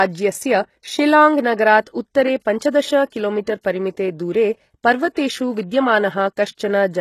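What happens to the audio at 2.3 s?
At 2.3 s the speech has gritty, lispy s sounds and nothing above 12.3 kHz, throughout the clip. This is likely HE-AAC compression at a rate fitting about 16 kbps: treble rebuilt from copied lower bands, so its harmonics misalign. Plain low-pass filtering would sound dull, not metallic.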